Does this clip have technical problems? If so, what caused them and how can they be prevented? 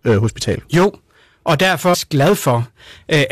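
Yes. Hard clipping runs through the whole clip: the speech was driven about 8 dB past what the recording chain could pass, so roughly 7 percent of samples have their peaks sliced flat, adding high harmonics heard as a harsh fuzz on louder syllables. Setting input gain with headroom, so peaks stay well below full scale, prevents it.

Damaged data in a compressed stream appears from 1.93 to 1.95 s: corrupted bytes made the decoder misread those frames and lose sync while hunting for the next frame header, producing a brief glitch. Reliable transfer with checksums or error correction, and keeping metadata out of the audio payload, prevents it.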